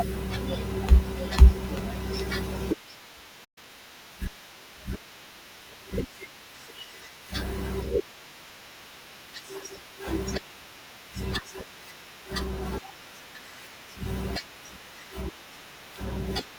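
A playback stall hits at 3.44 s: the speech cuts out mid-flow and stays silent until 3.58 s, a gap of roughly 120 ms. The likely cause is the player running short of buffered data, or its output thread being held up.

Time-compressed catch-up follows from 3.58 to 3.7 s. The player works off the backlog by dropping short slices and cross-fading the joins, so the speech runs at about twice normal speed without rising in pitch.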